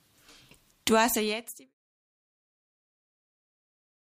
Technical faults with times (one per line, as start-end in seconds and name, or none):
none